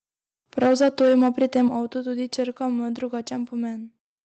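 From 0.58 to 1.62 s the loudest syllables take on a harsh, crackling edge, with their peaks driven about 8 dB past the converter's limit and roughly 7% of samples flattened. This is microphone overload, most likely from input volume set too high, so the converter clips the waveform tops. Unlike codec distortion, the grit tracks the loud peaks and vanishes on quieter sounds, while the call path's Opus coding stays a steady band-limited haze with nothing above 8 kHz.

At 0.67 s, just after the crackle begins, the level drops by about 2 dB, then at 1.68 s, right after the clipped stretch ends, by about 6 dB. Both are the microphone volume stepped down, likely by the call software reacting to the overloaded peaks. Voice and background fall together in a single instant and stay down, which separates this from a compressor's pumping that recovers, or a gradual fade.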